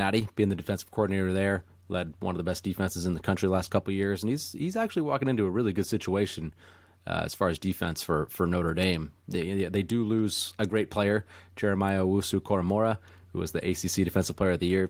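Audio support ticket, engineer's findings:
No faults found in this speech audio.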